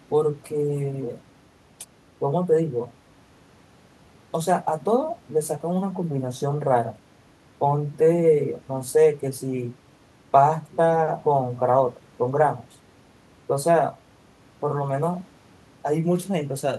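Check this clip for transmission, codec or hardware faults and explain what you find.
No transmission, codec or hardware faults can be heard; the speech signal holds steady and continuous with nothing technical intruding on it.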